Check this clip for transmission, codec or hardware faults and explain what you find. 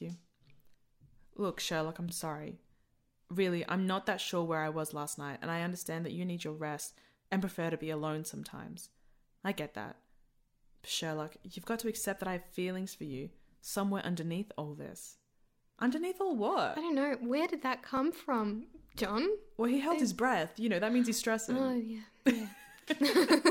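Two brief stutters point to a repeated buffer fault, at 2.09 to 2.11 s and at 17.97 to 18.00 s, just after "did that". Each time a 23 ms fragment of the speech plays twice, with a hard join where the repeat starts. New audio reached the output late, so the device replayed its last block once, which fits a 1024-sample buffer. The repeat delays what follows, and none of the speech seems to be lost.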